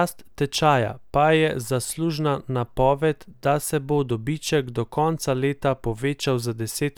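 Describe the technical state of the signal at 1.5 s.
At 1.5 s the speech signal is intact, with no audible fault at that point.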